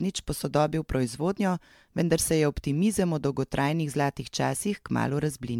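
From start to finish the speech carries a swirly, hollow quality, with consonant attacks smeared and a watery shimmer in the upper range. That's well beyond what a single pass of something like a 128 kbit/s MP3 would do, so the likely cause is generation loss: the audio seems to have gone through lossy decoding and re-encoding around ten times. Each pass re-quantises on a shifted frame grid, and the noise and spectral gaps pile up.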